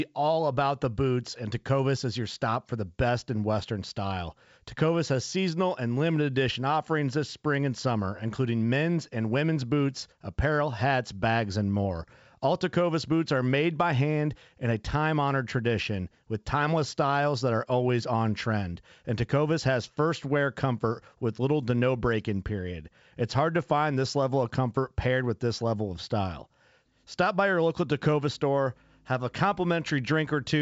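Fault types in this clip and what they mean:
No faults in this clip.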